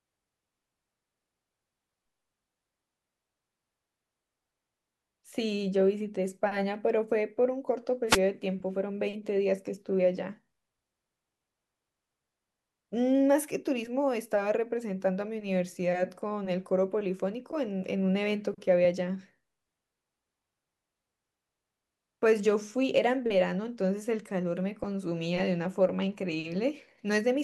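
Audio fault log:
8.07 to 8.19 s, wireless microphone noise hit: a brief swish of static over the speech as the analogue FM radio link fades and the receiver's hiss floods in for about 0.12 s. On a spectrogram it shows as a broadband vertical smear. The waveform shows a ragged, noisy patch.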